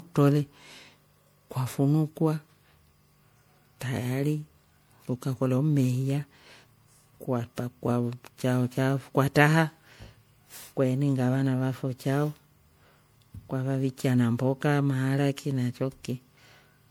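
From start to finish the speech carries generation loss: a swirling, hollow, smeared quality, with consonant attacks blurred, worse than a single encode at a bitrate of around 96 kbit/s would give. It was likely encoded with MP3 about five times over, each pass requantising on a shifted frame grid so the damage piles up. A spectrogram shows flickering holes and smeared blocks throughout, with nothing above 20.9 kHz; the waveform's transients look softened.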